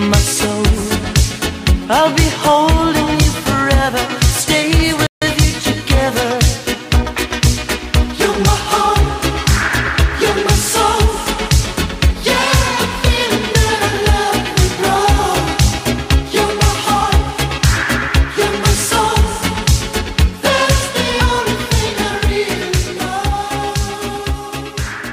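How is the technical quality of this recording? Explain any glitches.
The recording has one clear glitch, a playback stall. From 5.07 to 5.22 s the sound cuts out abruptly mid-flow, leaving roughly 150 ms of dead silence before resuming. The likely cause is the player running short of buffered data, or its playback thread being held up, so nothing reached the output until it caught up. The gap is sharp-edged rather than faded, and is heard as a brief hiccup in the sound.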